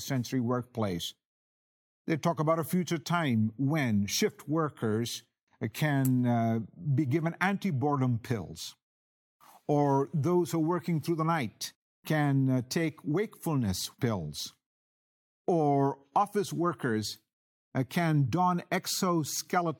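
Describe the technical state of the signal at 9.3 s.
At 9.3 s the speech signal is intact, with no dropout, clipping, glitch or other technical fault at that point.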